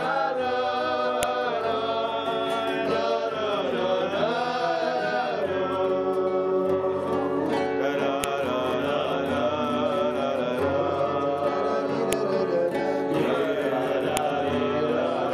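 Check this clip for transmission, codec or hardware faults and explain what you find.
Four faults of one kind were found: a file header played as audio, at 1.23, 8.24, 12.13 and 14.17 s. Separately stored WAV pieces were joined without stripping their headers, so each header's bytes were decoded as samples, producing a sharp, loud click at the start of every joined piece.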